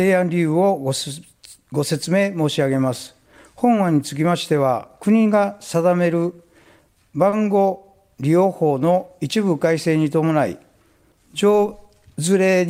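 The audio has three short stalls from late packets, close together, at 6.63, 6.93 and 7.29 s. Each time, a packet had not arrived when it was due and the jitter buffer ran dry. The receiver held the last sound until the packet came in, then carried on from the same point. The holds fill about 20, 20 and 30 ms. Nothing is lost. Each spot sounds briefly frozen, with a faint buzz or dip. Later, from 8.39 to 9.09 s, there is a jitter buffer slow-down. The buffer needed a bigger reserve, so the receiver repeated single pitch periods or slivers of pause over and over. That adds about 43 ms in total. Playback drops to 95% speed with no change in pitch. The passage sounds drawn out.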